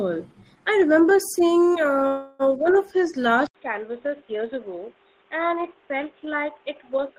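A speech clip with two separate faults. From 2.07 to 2.42 s there is a call audio freeze: the sound stops moving forward and a fading buzzy continuation fills about 320 ms, after which the speech resumes with "one of his" and nothing missing, only delayed. The likely cause is packets held up so the jitter buffer ran dry. On a waveform this shows as a smooth decaying smear; on a spectrogram, a stretch of static, blurred harmonics instead of changing formants. Then at 3.47 s, after "one of his", the input switched to a poorer device, likely a headset call profile or a second microphone. An 80 ms silence marks the switch, and from there to the end nothing reaches above 3.8 kHz. The level drops by about 5 dB, and a new noise floor appears roughly 30 dB below the speech. A spectrogram shows a hard ceiling at 3.8 kHz with a raised grey floor, and the waveform steps down in amplitude.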